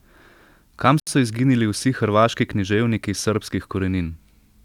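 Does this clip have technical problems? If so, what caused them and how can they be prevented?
Yes. A Bluetooth stall is the likely cause: radio interference appears to have held back packets on the wireless link, so the headphones' small playback buffer emptied before the resent data arrived. In this speech clip that shows up as a dead gap of about 72 ms, from 1.00 to 1.07 s, where the sound drops to silence and then resumes. Keeping the phone close with a clear line of sight and away from busy 2.4 GHz devices helps prevent it.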